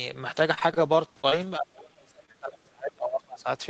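Speech passed through an Opus call link whose audio stops near 8 kHz. Between 0.39 and 1.48 s it suffers repeated packet loss and takes on a robotic sound. Ten separate gaps, none longer than 30 ms, are each patched by stretching the preceding sound, so about 13% of that stretch is synthetic. Because the holes recur in close succession rather than once, the voice turns choppy instead of showing a single isolated glitch. From 1.59 to 3.47 s the talker's level sinks and breaks up, at its worst by roughly 35 dB, over about two seconds in all. This is most likely speech suppressed in double talk: an echo canceller, unable to tell the near talker from the far side's loudspeaker echo, pulls everything down. Unlike packet loss, nothing is smeared or repeated. The voice simply ducks, thins and drops out in pieces. Inside that stretch, two short concealed packet losses fall at 2.25 to 2.30 s and 2.32 to 2.36 s, each filling about 20 ms. 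There the decoder extrapolates the last waveform and crossfades back, leaving a brief smear or wobble where a consonant can disappear. A plain dropout would instead leave a hard silent gap, and a bare click would carry no smeared tone.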